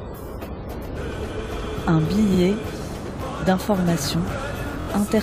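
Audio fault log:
2.33–2.38 s, repeated frames: a 46 ms block plays twice, a brief stutter, consistent with two compressed frames resent; adds 46 ms.
4.80–4.87 s, repeated frames: a 23 ms block plays four times in a row, a rapid stutter, fitting one frame duplicated thrice; adds about 70 ms.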